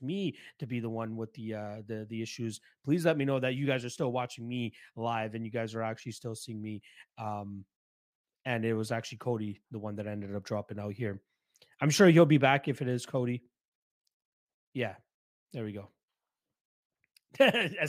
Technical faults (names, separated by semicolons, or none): none